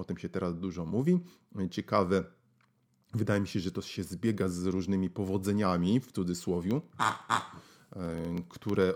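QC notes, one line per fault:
6.64–8.89 s, periodic USB or driver dropouts: right after "z różnymi powodzeniami w", a tiny sliver, about a tenth of a millisecond, gets zeroed out every 64 ms, so you hear roughly forty even ticks riding on the speech while it's sounding.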